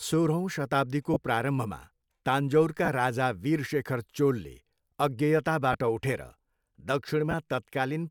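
At 1.14–1.16 s, right after "सोह्रौँ शताब्दीको", the speech briefly turns to a noisy smear: lost LE Audio frames, about 22.5 ms' worth, which fits three 7.5 ms frames. The LC3 decoder patches the gap by replaying the last spectrum with scrambled signs, so the tone goes grainy. The same thing happens at 2.85–2.88 s, just before "राजा वीरशेखर चोलले", at 5.73–5.75 s (a shorter 15 ms gap), and at 7.31–7.34 s.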